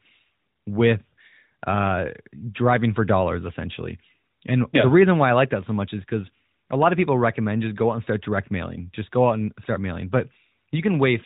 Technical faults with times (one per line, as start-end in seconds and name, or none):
none